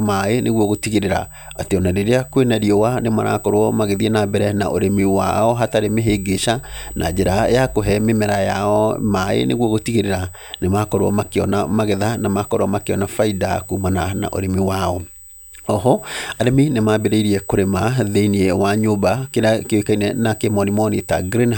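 USB whine runs throughout the speech: a fixed-pitch tone at 8 kHz, strongest at its 16 kHz harmonic, sitting roughly 20 dB below the voice. The bus draws current in 125-microsecond microframes, and that pulsing leaks into the audio through shared power or ground.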